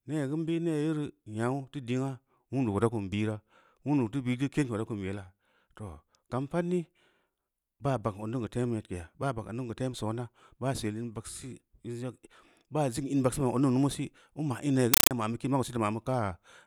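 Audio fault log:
14.94–15.11 s, compressed stream played as audio: the speech is replaced by harsh, very loud chattering static, because an AC-3 bitstream reached the output as if it were ordinary PCM samples and was never decoded. Each data frame plays as a dense noise burst about 8 ms long followed by silence, repeating 31.25 times a second. On a waveform this shows as dense blocks separated by flat gaps. On a spectrogram it shows as broadband vertical stripes spanning the whole frequency range.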